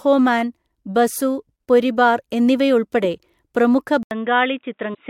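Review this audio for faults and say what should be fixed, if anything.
Input switched to a poorer device at 4.03 s, lasting to the end of the clip. An 80 ms silence precedes the change. The speech then loses everything above 3.8 kHz, drops around 5 dB in level and picks up a faint new background noise. This likely comes from the system swapping to a narrower-band microphone or a headset call profile, whose own tone and noise replace the original input's. To prevent it, lock the recording to a fixed input device and disable automatic switching to call profiles.

Damaged data in a compressed stream from 4.91 to 4.97 s, inside the already-switched section. Corrupted bytes in the encoded frames there leave the decoder misreading them and losing sync while it hunts for the next valid frame header. The result is a brief glitch of about 60 ms. To prevent it, verify stream integrity with checksums and reliable transport, and keep metadata out of the audio payload.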